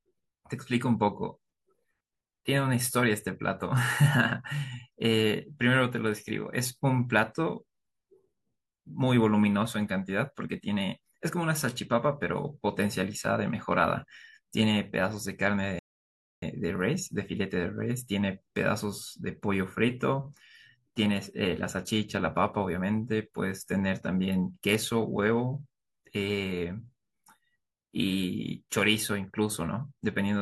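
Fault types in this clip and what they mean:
Rebuffering stall: playback ran out of downloaded audio, so the speech falls silent from 15.79 to 16.42 s and then resumes exactly where it stopped, adding 0.63 s. Unlike a dropout, nothing is skipped. Time is inserted rather than audio removed.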